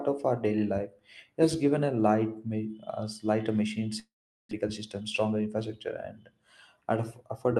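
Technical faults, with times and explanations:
3.99 to 4.53 s, long network dropout: just after "lighter machine" the sound stops and decays to silence, likely lost packets, unlike a brief glitch, with about 0.4 s truly missing.
4.61 to 5.61 s, jitter buffer speed-up: speech runs about 9% faster at unchanged pitch as pitch periods are trimmed to shed roughly a tenth of a second of backlog.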